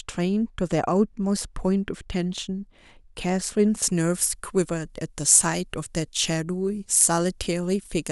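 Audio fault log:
3.82 s to end, pre-emphasis left on: from this point the speech turns abruptly thin, bright and hissy, with sibilants sharpened and the lower body of the voice receding. The treble lift applied for recording or transmission was never followed by its matching de-emphasis, so high frequencies stand about 14 dB above the 1 kHz level at 10 kHz. The shape of the rise fits the 75 µs FM emphasis curve.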